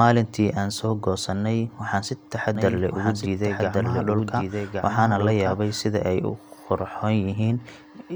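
From 2.55 s to 5.81 s, right after "waxaan si", the speech has a doubled audio track: a second full-band copy runs about a second behind, around 5 dB quieter. Unlike an echo or reverb, it has no decay, no room colour and no repeats. It is a single clean duplicate that switches on and off abruptly. The likely cause is the audio being captured twice through a slower second path, or an edit leaving two copies out of step.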